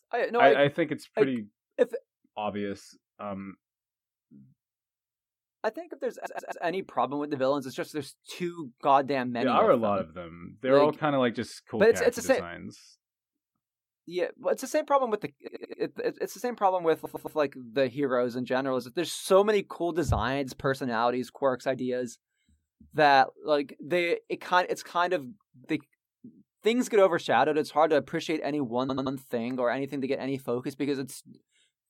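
Speech with repeated frames: short runs of compressed frames were delivered more than once, so the decoder replays 85 to 128 ms blocks three or four extra times. Stutters land at 6.25 s after "I think if there's", 15.47 s after "same problem with the", 17.04 s after "the same problem with", and 28.88 s, each lengthening the audio by 0.26 to 0.38 s.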